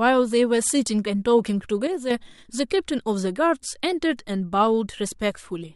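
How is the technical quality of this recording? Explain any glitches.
The recording has one glitch, a sudden gain jump. From 1.87 to 2.1 s, a gain change was likely applied instantly rather than ramped, so the speech and background noise drop together by about 6 dB in a single step, then jump back.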